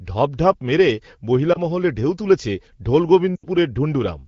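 Lost AMR speech frames at 1.53 to 1.57 s and 3.36 to 3.46 s: the AMR-WB decoder bridged missing data by repeating its last good pitch and vocal tract settings at falling gain. The first is a brief dip, consistent with one lost frame; the second is a longer gap that drops to near silence within two frames, like several consecutive losses.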